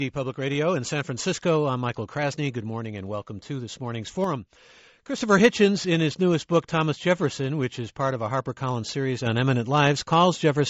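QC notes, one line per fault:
4.24 to 5.18 s, sudden gain jump: the level drops by about 6 dB in a single step, background noise included, then snaps back up. This is likely a digital gain change applied sample to sample with no ramp, so sound and noise floor shift together.
9.26 s to the end, sudden gain jump: the level lifts abruptly by about 5 dB, noise floor with it. This is likely another unramped gain step, jumping between adjacent samples.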